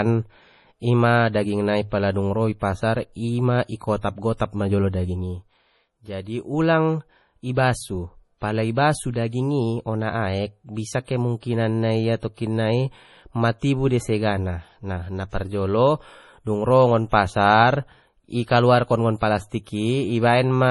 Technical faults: MP3 compression; pre-echo

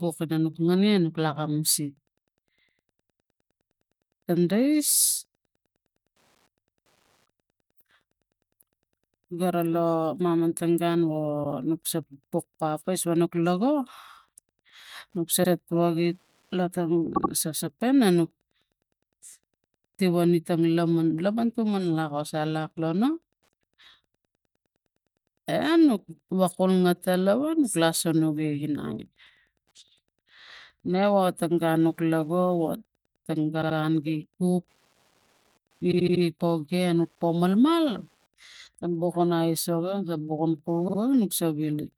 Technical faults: Wi-Fi interference; repeated frames

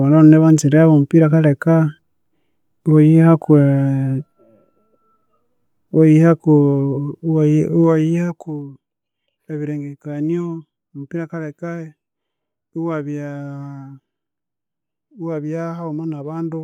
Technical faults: zipper noise

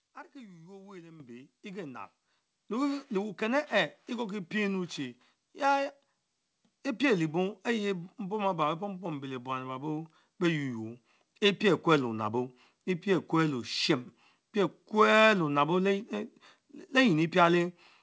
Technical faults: microphone volume stepped up

